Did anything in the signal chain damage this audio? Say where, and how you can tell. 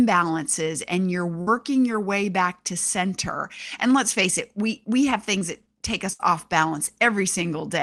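Yes. Bursts of packet loss at 1.41 to 1.49 s and 6.13 to 6.21 s point to the network stage of a call path whose codec keeps audio only up to about 12 kHz. After "and you're" the receiver held the last sound as a fading buzz or hiss for about 50 ms, and speech then resumed at "your way back to" with about 60 ms missing. After "that take" the same held-and-fading fill lasted about 65 ms, and again about 60 ms of speech was skipped.

Short concealed packet loss at 5.39 to 5.43 s is the same network fault on a smaller scale. Between "it we we have" and "that take", roughly 20 ms of audio arrived too late for the decoder. The receiver extended the preceding sound, either continuing its pitch or shaping noise, and then crossfaded back into the real signal. What you hear is a brief smear or wobble rather than a held tone, and a short consonant there can drop out entirely.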